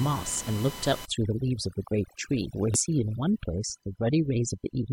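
From the first moment, a fixed-pitch whine runs under the speech. This is USB whine: current drawn by the USB bus in regular 1 ms frames leaks into the audio through power or ground, producing a tone at 1 kHz and its multiples. Here the 3 kHz harmonic is the strongest, sitting roughly 20 dB below the speech. On a spectrogram it appears as thin, perfectly straight horizontal lines at 1, 2 and 3 kHz across the whole clip.

At 1.05 s, overdone noise removal takes hold and lasts to the end. A noise reduction stage set too aggressively cuts individual frequency bands whenever they approach its noise estimate. The room noise, which sat about 14 dB under the speech before this point, collapses toward silence with scattered twinkling specks. The quieter parts of the voice are removed along with it. A spectrogram shows a dark, patchy background dotted with isolated bright flecks, and ragged, eroded edges around the speech harmonics.

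At 2.74 s, a short glitch cuts in. This is damaged data in a compressed stream: corrupted bytes made the decoder misread frames, lose sync and hunt for the next valid header, which produces a brief burst of garbled output. In the waveform it appears as an abrupt irregularity lasting a few tens of milliseconds at most.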